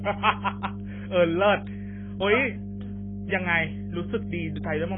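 Speech runs the whole way through this recording, and two faults sit under all of it from start to finish. The first is a mains hum: a steady low tone at 50 Hz, sitting only around 10 dB below the speech, so it stays clearly audible as a drone beneath the talking and fills every pause. It points to power-line leakage through a ground loop or a nearby transformer. On a spectrogram it shows as an unbroken horizontal line at 50 Hz across the full width. On the waveform the gaps between phrases never fall flat but carry a continuous low ripple. The second is heavy damage from AAC compression, likely AAC-LC at a very low bitrate, around 16 kbps. Nothing is left above 3.6 kHz, so the speech sounds dull and boxed-in, with a smeared, warbling, fizzy edge on sustained sounds and sibilants. The codec quantises the spectrum coarsely against a hearing model and drops or approximates the detail it judges least important. 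On a spectrogram everything stops at a hard ceiling at 3.6 kHz, and the region below it looks patchy, with holes or noise-filled blocks in place of clean harmonic detail.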